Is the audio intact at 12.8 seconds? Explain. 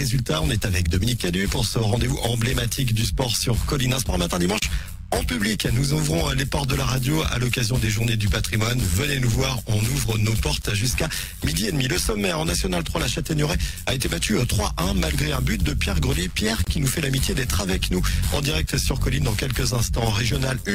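No. Throughout the clip, overlap-add ripple from frame windows not summing evenly swings the level about 11 dB around 100 times a second, a metallic buzz.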